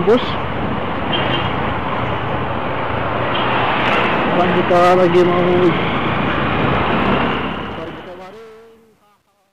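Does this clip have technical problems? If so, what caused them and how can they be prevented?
Yes. The fade-out that begins around 7 s shows truncation distortion on a fade from 7.24 s to the end at 9.52 s. The gain stage drops low bits without dither, and the grainy texture points to roughly 10-bit resolution. As the level approaches the smallest step, the waveform collapses into coarse square steps, so the tail sounds gritty. From 8.12 s onward the grit is at its worst. To prevent this, apply fades at high internal bit depth and add dither whenever the word length is reduced.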